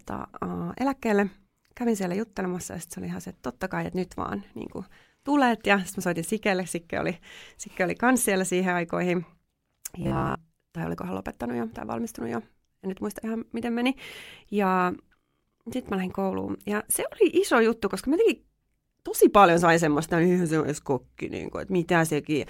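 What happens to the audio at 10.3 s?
Audio likely arrived too seldom, so a short buffer of about 15 ms repeated from 10.02 to 10.38 s. This robotic sound from repeated short buffers is a rigid, metallic 66.8 Hz buzz.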